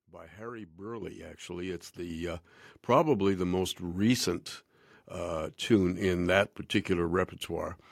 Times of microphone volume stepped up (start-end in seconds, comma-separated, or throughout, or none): 1.02, 2.10